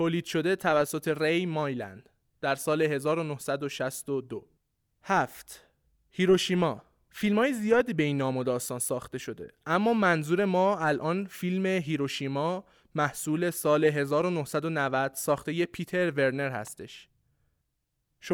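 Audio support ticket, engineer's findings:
Sharp snap at 8.87 s, sitting on top of the speech, peaking around -25 dBFS. A second, quieter snap at 16.67 s, near -30 dBFS. Both very brief. Likely an electrical switching spike. A nearby switch, motor or static discharge arcs, and the audio line picks up the burst as an added transient. Check cable routing, grounding and nearby switched loads.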